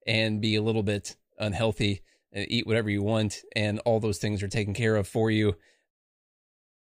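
No technical faults are audible.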